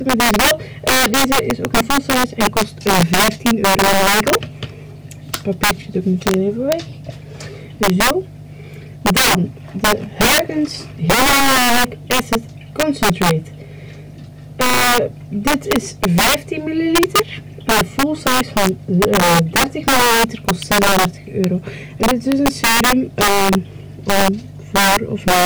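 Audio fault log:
Throughout: integer overflow. The level is pushed roughly 12 dB too hot, and instead of being capped, the loudest peaks wrap around to the opposite extreme, somewhere around 7 percent of the samples. Each wrap is a full-scale jump, so loud moments crack violently, far harsher than ordinary clipping.
20.62 s: electrical switching spike. A sharp snap, only a few milliseconds long, lands on top of the sound. It most likely comes from a nearby switch, motor or static discharge arcing and coupling into the audio line, which explains how abrupt and brief it is.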